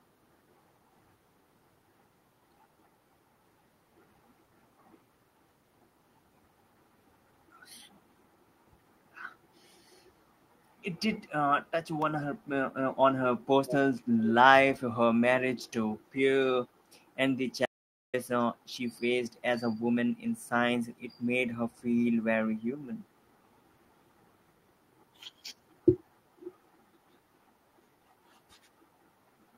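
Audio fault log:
12.02 s, electrical switching spike: a sharp snap lands on top of the speech, likely from a nearby switch or discharge arcing into the audio line. On a waveform it is a narrow vertical spike; a spectrogram shows a thin full-height stripe.
13.66 to 13.75 s, echo leak: a brief scrap of delayed speech returns about 430 ms after the original, roughly 10 dB quieter, likely because a loudspeaker's echo canceller let it through. A spectrogram shows a faint, shifted repeat of the earlier harmonic pattern.
17.66 to 18.14 s, audio dropout to silence: the sound cuts out for about 480 ms with no room tone at all, likely a lost input while silence was still being written. The waveform goes flat; the spectrogram shows a blank black gap.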